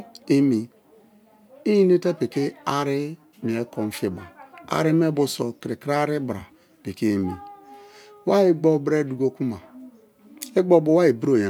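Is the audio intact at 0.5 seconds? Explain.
Yes, at 0.5 seconds the speech is intact, with no dropout, click, distortion or other fault at that moment.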